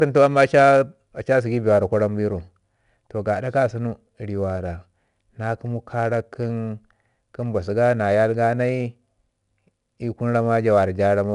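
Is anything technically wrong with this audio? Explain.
Yes. 4-bit ADPCM compression runs through the whole clip. Each sample is stored as a coarse 4-bit step from a prediction. The error is a plainly audible gritty hiss on the louder sound. Nothing sits above 10.7 kHz, which fits a rate near 89 kbps.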